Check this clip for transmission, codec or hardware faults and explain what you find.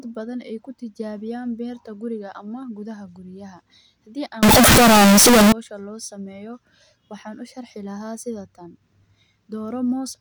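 One fault, in the speech between 4.43 and 5.52 s, sounds like float read as integer. The sound turns abruptly loud, harsh and square-edged, noise matching speech, yet pitch stays followable. Likely cause: 32-bit float samples interpreted as 32-bit integers. Unlike ordinary clipping, level jumps regardless of original loudness.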